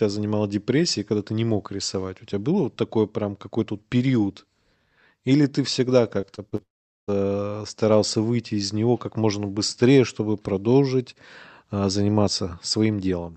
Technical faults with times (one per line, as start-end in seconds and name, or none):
6.21-6.60 repeated packet loss (robotic sound)
6.62-7.09 long network dropout